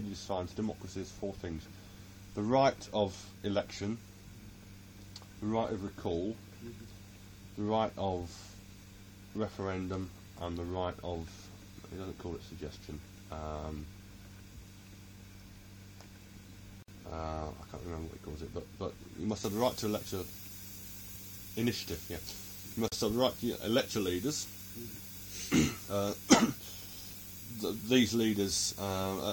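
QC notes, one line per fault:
16.82 s and 22.88 s: gap at a join of encoded pieces. Silences of about 59 ms and 40 ms open in continuous sound, with edges softened by the codec. The sound then resumes exactly where it stopped, because separately encoded pieces were joined with each encoder's start delay and final-frame padding left in. Unlike a dropout, nothing goes missing.
19.44 s to end: pre-emphasis left on. From here the treble is lifted along the FM 75 µs curve, about 14 dB stronger at 10 kHz than at 1 kHz, so the sound turns thin, bright and sibilant because the matching de-emphasis was never applied. It is a smooth, rising tilt rather than a narrow resonant peak or added hiss.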